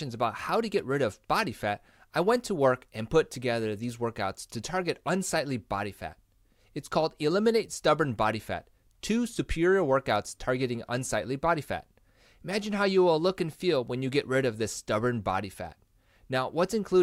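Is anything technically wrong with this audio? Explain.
No, no technical faults here.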